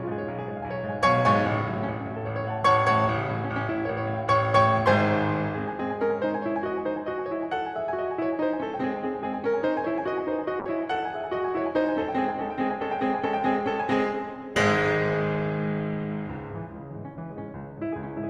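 A call bitrate drop hits this music clip from 10.6 s to 18.13 s. The call's bandwidth estimate fell, so the encoder was starved of bits, consistent with a fall from around 96 kbps to roughly 22 kbps. The audio turns coarse and watery, and the top end is cut from about 20 kHz down to about 12 kHz, dulling the music. The worst stretch lasts about 5.5 s, and the quality recovers just before the clip ends.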